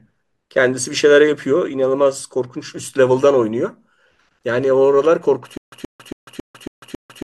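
A playback or streaming stall, likely with a retry replaying the last buffered fragment each time, produces a stutter with silent gaps in this speech clip from 5.57 s to the end. A 127 ms burst repeats six times, each followed by about 149 ms of digital silence, every 275 ms, and the speech that belonged there is lost.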